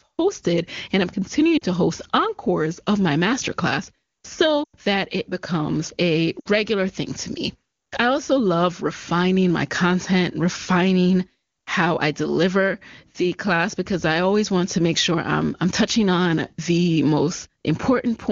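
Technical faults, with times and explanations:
1.58 to 6.48 s, lost AMR speech frames: speech smears and thins at 1.58 to 1.64 s (40 ms), 4.64 to 4.75 s (100 ms, about five 20 ms frames) and 6.40 to 6.48 s (60 ms). Unlike a hard dropout's click or silent gap, the AMR-WB decoder extends the last good pitch and spectral shape with falling gain. The longest run audibly fades before speech resumes weak.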